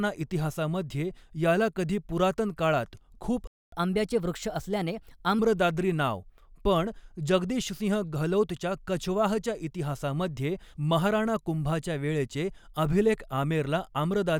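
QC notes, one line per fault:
3.47–3.72 s playback stall: the speech drops to silence for 250 ms, likely because the player ran short of buffered data, then resumes where it stopped.
3.72–5.39 s catch-up at higher speed: the player resamples its backlog at 1.15x, so speech runs faster and roughly two semitones higher until normal pace returns.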